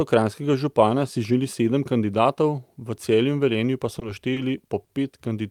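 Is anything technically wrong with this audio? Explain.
Yes. Three short stalls from a late packet occur, at 3.99 s, 4.33 s and 4.84 s. Each time a packet arrived late, the jitter buffer emptied, and the receiver held the last sound for about 20, 30 and then 50 ms before resuming where it left off. Nothing is lost, but the held sound is drawn out, with a faint buzz or dip.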